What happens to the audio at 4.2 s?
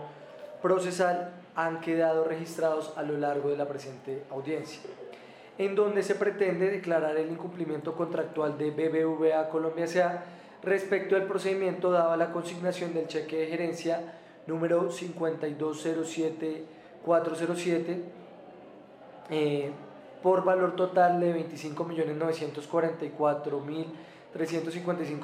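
Nothing goes wrong at 4.2 s; the audio runs through that moment intact, with no dropout, click or distortion.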